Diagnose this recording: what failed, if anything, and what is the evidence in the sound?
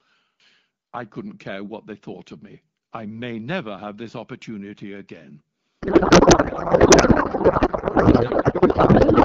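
The fault lies in the codec stage: a codec payload misread. From 5.82 s, just after "have this opportunity again", to the end at 9.25 s, the clear wideband speech of the AMR-WB link (consistent with its 12.65 kbit/s mode) gives way to garbled noise and warble that barely tracks the talker. This fits octet-aligned AMR frames being parsed as bandwidth-efficient, so the decoder reads its parameter fields from shifted bit positions.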